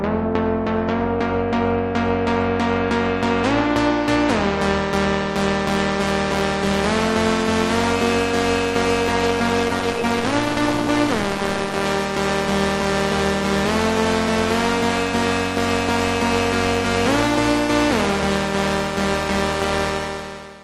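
A recording of everyday sound with a call bitrate drop from 9.12 s to 12.67 s. Over that span the audio turns rough and watery, with the texture smeared and duller, bottoming out for about 2 s before clearing. This is what happens when a call's bandwidth estimate falls and the encoder is forced to spend far fewer bits. The degradation fits a fall from around 32 kbps to roughly 14 kbps, then a recovery.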